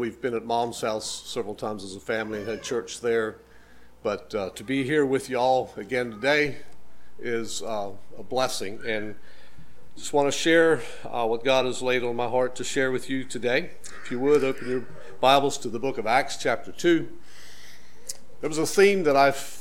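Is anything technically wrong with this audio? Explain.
Yes. At 6.46 s a DC step shifts the waveform's zero line by about -32 dBFS and holds to the end, producing a single low thump at the jump.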